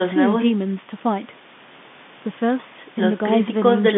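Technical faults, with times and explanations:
No technical faults can be heard in this speech.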